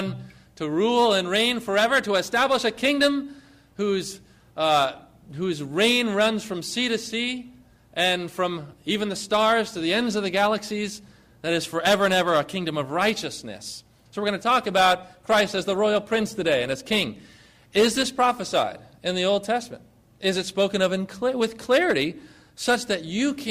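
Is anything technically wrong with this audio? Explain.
Yes. From 14.76 s to 18.76 s the audio drops to an adaptive stream at a lower bitrate. When the connection slowed, the player switched for four seconds to a leaner encoding, consistent with Opus falling from about 64 to 32 kbit/s. Codec smearing increases, then the sound recovers just as abruptly. Unlike a dropout or buffering stall, there is no gap or pause, only a sudden change in quality.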